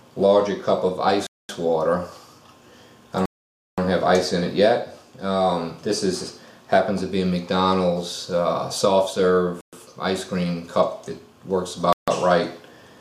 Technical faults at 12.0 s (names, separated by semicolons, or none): Bluetooth stall